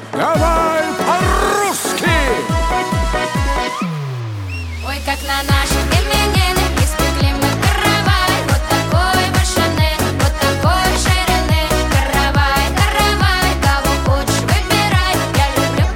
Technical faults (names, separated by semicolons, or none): none